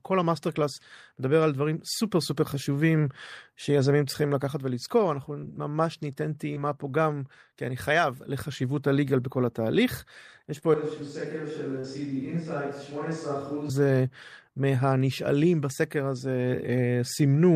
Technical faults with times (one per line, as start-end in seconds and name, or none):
6.54-6.58 short concealed packet loss
10.58-10.64 short concealed packet loss
10.74-13.69 switch to a distant microphone
11.80-11.86 short concealed packet loss